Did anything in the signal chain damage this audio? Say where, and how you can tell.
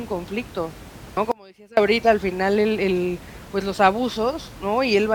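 Yes. At 1.17 s, damaged data in a compressed stream hits the codec stage: a brief disturbance where the decoder misreads a corrupt frame, seen as a thin broadband vertical streak.

From 1.32 to 1.77 s, about 457 ms, an audio dropout to a faint residue, likely a buffer or link loss, collapses the waveform abruptly to a trace about 25 dB down until "al final el el".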